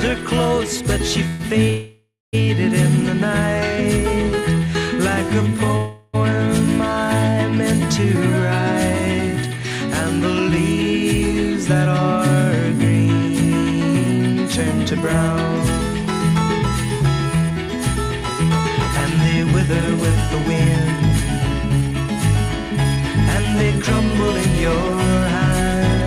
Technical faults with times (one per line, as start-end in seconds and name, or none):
1.27-1.42 call audio freeze
1.70-2.35 call audio freeze
5.77-6.15 call audio freeze
16.02-19.69 jitter buffer speed-up
21.72-24.49 jitter buffer speed-up